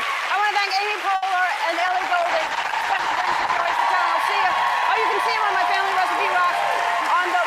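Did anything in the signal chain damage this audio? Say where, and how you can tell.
Yes. A short stall from a late packet at 1.15 to 1.24 s points to the network and jitter-buffer stage. At that point a sound is held unnaturally long, about 70 ms, with a slight buzz or dip, and then the audio picks up exactly where it stopped. Nothing is skipped. A packet arrived after its playout deadline, so the buffer ran dry and the receiver stretched the last audio until the packet turned up.

A call bitrate drop from 1.87 to 3.85 s comes from the call's rate control acting on the codec. The audio turns rough and watery, and the top end dulls, for roughly 1.9 s before clarity returns. The bandwidth estimate collapsed, and the encoder was pushed to very few bits. That degradation fits a fall from around 64 kbps to around 11 kbps, where Opus quantises coarsely and discards high frequencies until the rate recovers.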